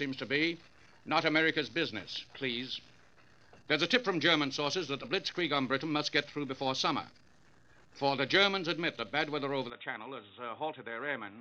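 At 9.70 s the audio abruptly turns dull and boxy, and it stays that way to the end at 11.41 s. There is no gap at the change. The top end now stops near 3.8 kHz. The level drops by roughly 5 dB. A new, different background hiss appears, well below the signal. This is likely an input switched to a poorer device, such as a second microphone or a headset's narrow call profile, which brings its own bandwidth, tone and noise.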